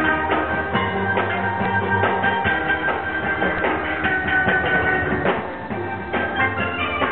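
Compressed frames skipped at 3.08 s: the decoder never played roughly three 23.2 ms frames, so the audio jumps ahead about 70 ms.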